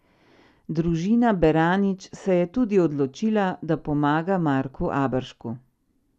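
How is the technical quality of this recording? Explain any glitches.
One glitch in this speech recording, otherwise not assessed. DAB burbling from 1.98 to 2.23 s: weak reception let bit errors, a small fraction of a percent, slip past error correction, putting short blips of noise into single sub-bands.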